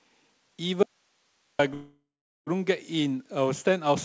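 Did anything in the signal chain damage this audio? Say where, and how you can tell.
Yes. Between 0.83 and 1.59 s there is an audio dropout to a faint residue, likely from the source feed breaking upstream while the input stayed live. The speech cuts off abruptly for about 0.76 s, leaving only hiss roughly 45 dB below the signal, not a natural pause or fade.

From 1.74 to 2.49 s there is a call audio freeze at the network and jitter-buffer stage, likely caused by delayed packets draining the buffer. The last sound is stretched into a fading tail that ends in about 0.42 s of silence. Speech then resumes where it stopped, with nothing lost but 0.73 s of added delay.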